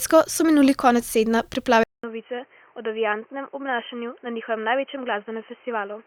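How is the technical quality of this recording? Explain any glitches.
The recording starts clean and then degrades for the rest of the speech. From 1.84 s to the end, the sound likely shows an input switched to a poorer device, a change of capture path mid-recording. After a gap of about 200 ms, the speech returns roughly 10 dB quieter and band-limited, with nothing above 3.1 kHz, so it sounds dull and boxy. A new background noise, around 35 dB below the speech, runs under it from that point on.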